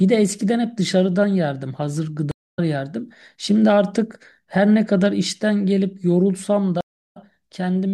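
At 2.31 to 2.59 s the speech drops out in a stream reconnect: the connection broke, the player fell silent for about 236 ms, then restarted a fresh decoder mid-stream and picked up roughly 0.3 s further on, so a chunk of speech is skipped. A second reconnect at 6.81 to 7.17 s leaves about 320 ms of silence and resumes only slightly later, a few hundredths of a second. Each restart begins softly. On a waveform both appear as flat gaps ending in a short ramp-up, and on a spectrogram as blank vertical bands with a hard discontinuity where the speech resumes.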